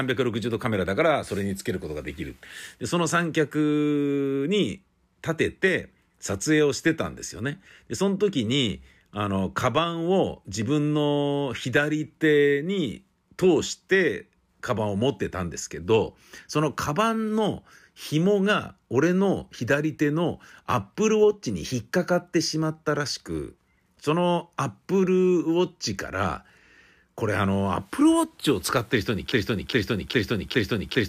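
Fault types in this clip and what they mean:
broken-record loop: the playback or stream likely stalled and kept resending its last held fragment, so from 29.32 s to the end a 0.41 s piece of speech repeats exactly four times back to back. Unlike a stutter or echo, the copies are identical and no new audio follows.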